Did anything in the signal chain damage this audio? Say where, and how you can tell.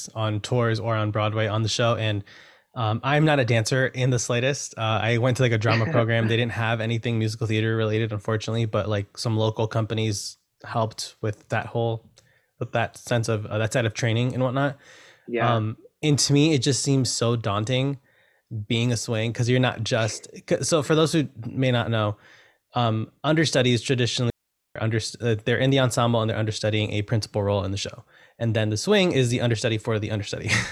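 Yes: a digital wireless dropout in the radio link at 24.3–24.76 s, after "not know um understudies". The receiver fades to a 0.46 s mute, leaving flat waveform and blank spectrogram, no noise burst.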